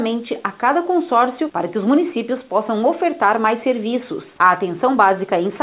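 At 4.38 to 4.40 s the sender's voice detector likely judged a brief stretch of the sound to be background and stopped transmitting. The receiver filled the gap with comfort noise, so about 10 ms of the actual sound is lost and a 20 ms patch of steady, featureless noise plays in its place before normal transmission resumes. This is sound dropped by the voice detector, heard as a tiny flat blip in the sound. Throughout, nothing is heard above 4 kHz, which fits a G.711 A-law call path.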